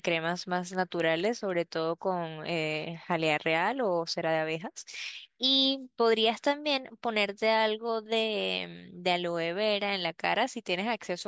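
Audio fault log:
0.0–1.5 s, resampler restarted on every block: the speech carries a regular tick at 4.0 Hz, one every 250 ms, only while the signal runs. Each 250 ms block was rate-converted in isolation, which fits a drop from 44.1 kHz to 16 kHz. At every block edge the converter's filter lacked the neighbouring samples and worked on silence or wrapped-around data instead, leaving a small error at each seam that is heard as the steady ticking.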